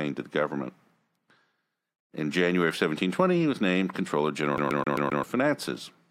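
From 4.57 to 5.23 s the speech sticks like a CD stuck on one turn. The same 0.13 s section repeats five times, and each jump leaves a short mute. On the waveform this shows as identical blocks separated by gaps.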